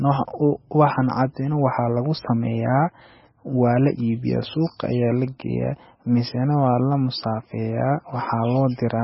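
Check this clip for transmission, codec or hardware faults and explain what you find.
The clip carries heavy codec damage from start to finish, most likely MP3 compression at a very low bitrate, around 17 kbps judging by how much is missing. Nothing survives above 5.6 kHz, so the speech sounds dull and boxed-in, with a watery, swirling texture and chirpy s sounds. Starved of bits, the encoder discards the treble outright and lets weak frequency lines drop in and out between frames. A spectrogram shows a hard ceiling at 5.6 kHz and speckled, flickering gaps below it.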